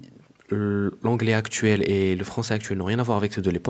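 No technical faults can be heard in this speech recording. It carries the mark of a call path, with nothing above 8 kHz, consistent with an Opus-coded call.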